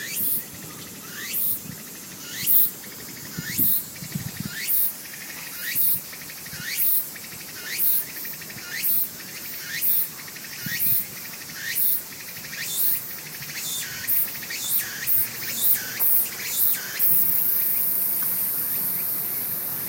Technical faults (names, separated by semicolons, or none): none